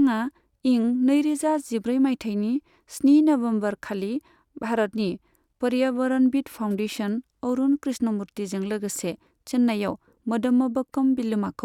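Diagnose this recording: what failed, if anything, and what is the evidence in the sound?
Nothing failed in this speech recording, and no stage of the chain shows a fault. None of the capture, conversion, transmission or playback stages leaves any audible evidence of a problem.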